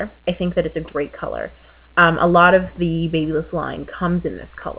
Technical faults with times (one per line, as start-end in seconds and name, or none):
none